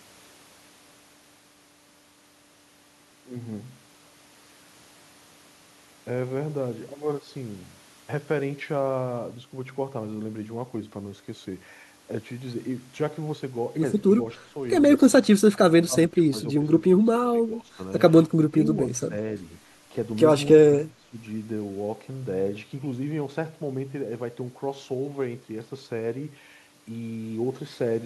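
The speech dips and thins in short bursts at 14.34 to 14.5 s, 15.87 to 16.64 s, 16.81 to 17.79 s, 18.26 to 18.56 s, 18.74 to 19.14 s and 20.61 to 21.16 s, sagging by around 10 to 20 dB and at 20.61 s by roughly 30 dB. This is speech suppressed in double talk, likely from an echo canceller that could not tell the talker from the loudspeaker echo while both sides spoke, so it turned everything down.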